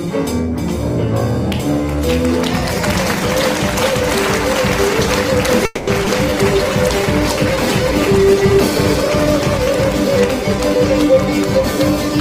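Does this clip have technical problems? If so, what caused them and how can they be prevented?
Yes. A call audio freeze at 5.65 to 5.90 s holds the sound for about 220 ms: the last sound is stretched into a fading fill rather than true silence, and when it resumes nothing is lost, so the audio right after it arrives 220 ms later. The likely cause is packets delayed in transit, draining the receiver's jitter buffer until they caught up. A larger or more adaptive jitter buffer, plus a steadier network path, would prevent this.

Two skip-ahead faults follow, at 6.05 s and 6.30 s. Right after the freeze, playback jumps forward to shed the built-up delay: roughly 70 ms of audio vanishes at the first jump and roughly 100 ms at the second, each bridged by only about 10 ms of fill, so the two sides of each cut butt almost straight together. This is audio dropped in transit or by an overflowing jitter buffer while later audio was already waiting. 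Draining gradually through time-stretching instead of dropping chunks would prevent it.

A call bitrate drop runs from 6.31 s to 9.73 s, with the encoder going from 32 to 16 kbps for about 3.4 s. With half the bits, Opus codes the signal more coarsely, so the sound turns rougher and more watery until the rate recovers. The bandwidth estimate fell, probably reacting to the same congestion. Ensuring adequate, stable bandwidth and a less aggressive rate controller would prevent it.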